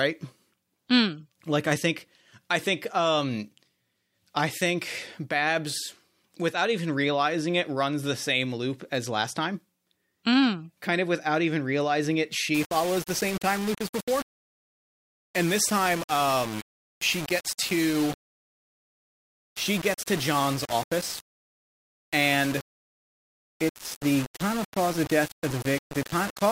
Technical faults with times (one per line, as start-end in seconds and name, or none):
12.54-26.52 low bit depth without dither